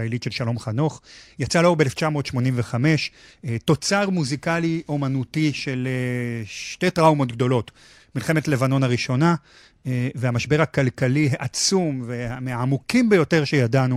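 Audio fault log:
No audible faults detected.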